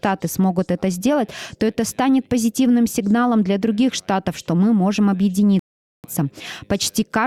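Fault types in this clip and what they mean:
Rebuffering stall: At 5.59 s the sound drops abruptly into silence, holds there until 6.04 s, then picks up exactly where it broke off, with nothing skipped or repeated. The player had used up all the audio it had downloaded and had to wait for more data to arrive before continuing. None of the recording is lost, but the pause stretches the playback by about 0.45 s.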